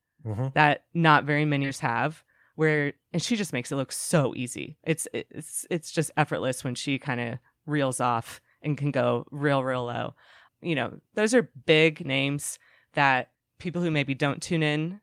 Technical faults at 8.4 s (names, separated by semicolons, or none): none